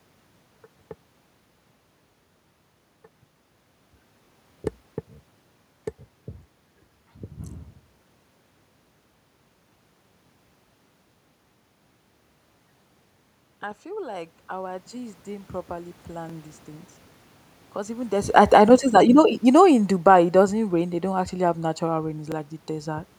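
Overlapping chunks first appear at 4.25 to 4.27 s. The audio is handled in blocks of 6.0 s, and each new block starts about 23 ms before the previous one ended, so that sliver plays twice. Each join sounds like a small click or stutter. The same thing happens at 10.27 to 10.30 s. On a waveform, each join shows a short repeated cycle pattern with a discontinuity at its edge. On a spectrogram, it appears as a thin vertical line. A 23 ms overlap fits a 1024-sample block at 44.1 kHz.

Automatic gain rising runs from 13.83 to 16.55 s. The gain control judged the input too quiet and raised its gain by about 9 dB over nearly three seconds. The speech and the room noise swell together, which marks this as gain control rather than a talker moving closer. The waveform envelope widens steadily, and the spectrogram brightens evenly across all frequencies, including the noise floor between phrases. 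Inside this rise, the third chunk join lands at 16.30 to 16.32 s with the same stutter.

Automatic gain falling begins after "even this" at 18.29 s and ends at 20.99 s, before "don't actually have natural". The gain control judged the level too high and lowered it by about 6 dB, so voice and background sink together. Around 18.0 s the talker also shifts position, but the gradual, even drop of the background identifies the gain change. The waveform envelope tapers, and the spectrogram dims uniformly across all frequencies. The final chunk join follows "actually have natural rain" at 22.32 to 22.34 s.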